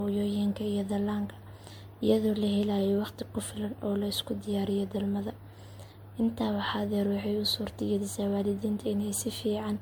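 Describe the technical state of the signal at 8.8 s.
At 8.8 s the speech carries the same degradation heard across the whole clip: a swirly, hollow, smeared texture, with consonant onsets softened and blurred. This points to generation loss, likely from roughly seven successive lossy encodes, which fits a 96 kbit/s MP3 chain. Each re-encode quantises again on a shifted frame grid, so noise and spectral holes build on one another and the damage exceeds what that bitrate alone would produce.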